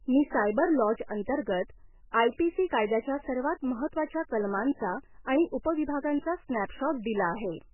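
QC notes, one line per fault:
Throughout, MP3 compression: speech sounds heavily watery and swirly, with nothing above 3 kHz, likely a bit-starved MP3 encoder, which fits about 8 kbps.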